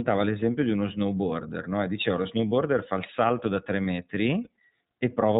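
Throughout, the speech carries plainly audible iLBC codec damage. Nothing above 4 kHz survives, and the voice sounds slightly rough and synthetic, which fits the 13.33 kbps mode with 30 ms frames, each coded independently of the one before it.

Lost iLBC frames appear twice. At 2.49 s, between "no e diceva lo" and "fa il salto da", about 30 ms is replaced by a repeated pitch cycle mixed with noise, giving a brief buzzy, held-vowel smear. A second 30 ms gap at 4.44 s sounds the same. Each fits a single lost frame, and clean decoding resumes immediately afterwards.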